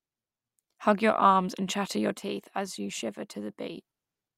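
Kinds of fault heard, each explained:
One channel drops out: right after "arms and chatter your", at about 2.17 s, the speech abruptly sinks by about 6 dB and stays there until about 3.77 s. The likely cause is one stereo side going missing, so the mono sum carries only half the shared signal.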